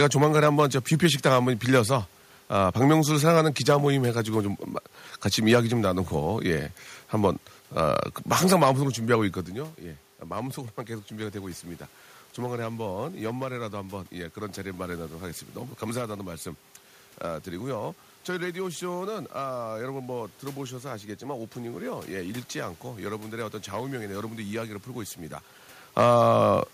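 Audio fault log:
Nothing to log here, since no faults turn up anywhere in this speech clip.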